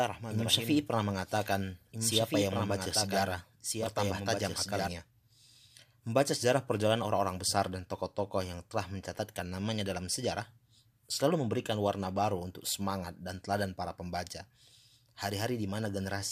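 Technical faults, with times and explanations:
0.00–4.88 s, doubled audio track: the speech is accompanied by a second, clean, full-band copy of itself trailing about one and a half seconds behind and a few dB quieter, already running from the start and cutting off abruptly at 4.88 s, likely from a slower second capture path.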